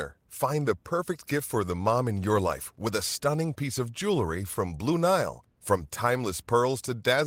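A short speech recording, with no technical fault to be heard anywhere in it. There is nothing here that needs a time or a cause attached to it.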